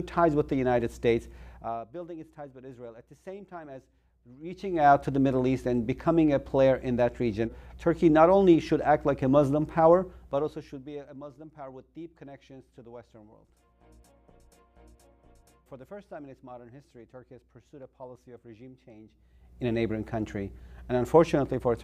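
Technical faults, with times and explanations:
Throughout, mains hum: a steady low tone sits under the whole clip at 60 Hz, roughly 25 dB below the signal, with some low harmonics above it. Power-line current has leaked into the signal path, most plausibly through a ground loop between connected equipment or by magnetic coupling from a nearby transformer. Because the interference follows the mains frequency rather than the programme, it does not change pitch or stop, and is most exposed wherever the wanted sound is quiet.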